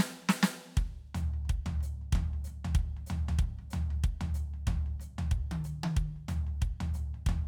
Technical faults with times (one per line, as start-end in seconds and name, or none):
none